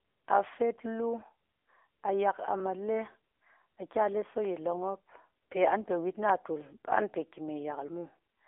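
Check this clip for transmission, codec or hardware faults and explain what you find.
The speech has passed through an AMR narrowband mobile codec for its whole length. The vocal-tract model, fed with sparse pulses, sounds buzzy and synthetic, which fits a low mode near 8 kbps. A spectrogram shows energy confined to roughly 0.3 to 3.5 kHz, with nothing above 3.7 kHz.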